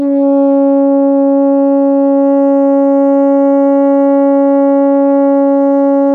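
Nothing in this bit of music points to a technical fault; it just rolls along without anything going wrong.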